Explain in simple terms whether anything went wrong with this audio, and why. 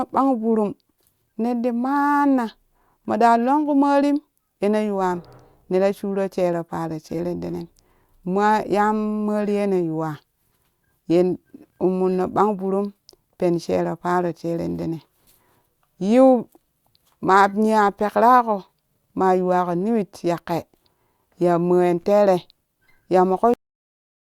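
A cut-off end at 23.54 s: the speech stops mid-sound and falls straight into dead silence for the last 0.7 s or so, with no natural fade. The final stretch of audio was never written out or played, so the recording simply ends abruptly.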